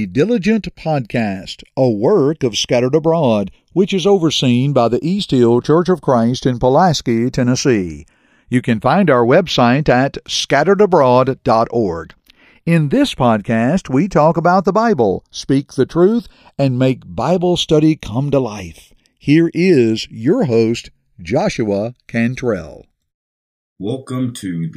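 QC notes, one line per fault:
Throughout: channels drifting apart. The two channels seem to run on separate clocks roughly 40 ppm apart, so their delay slides to under a millisecond by the end. Summed to mono, comb notches sweep slowly through the speech, heard as gradual flanging.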